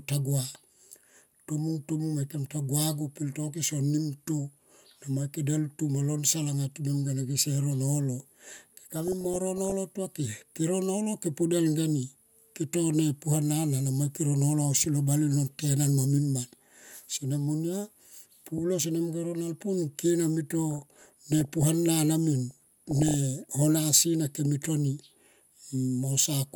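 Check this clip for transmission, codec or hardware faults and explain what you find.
The speech carries DAB burbling in three bursts: 8.90 to 9.72 s, 20.73 to 21.68 s, and 22.51 to 23.14 s, the last being the worst. Weak reception lets bit errors slip past error correction into the MP2 data, where corrupted samples put short noise blips in single sub-bands and corrupted scale factors make sub-bands jump in level for up to a frame. The error rate sounds to be a fraction of a percent, rising to around one percent in the final burst.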